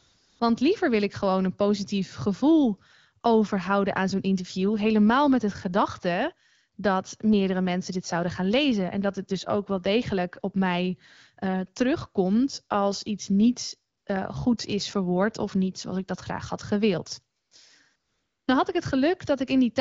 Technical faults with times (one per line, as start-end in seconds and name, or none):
0.00-0.39 AMR comfort noise
13.97-14.05 AMR comfort noise
17.39-17.51 AMR comfort noise
17.95-18.47 AMR comfort noise